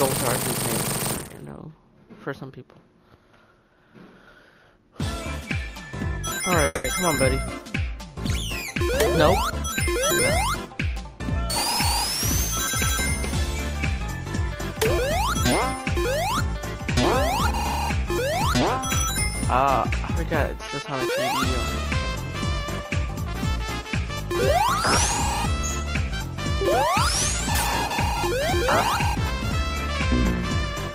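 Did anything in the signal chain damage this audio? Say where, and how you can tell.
Yes. At 6.65 to 6.86 s a call audio freeze, likely packets stalled in the network draining the jitter buffer, fills 190 ms with a fading continuation of the last sound before the sound resumes intact.

From 19.90 to 24.09 s a jitter buffer speed-up cuts repeated pitch-period slices, about a tenth of a second in total, so the sound runs 2% fast at unchanged pitch.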